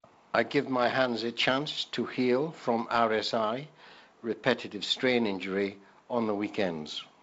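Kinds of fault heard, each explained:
Nothing stood out on listening to this speech clip, which comes across as G.722 wideband telephone audio with its top end stopping a little below 8 kHz.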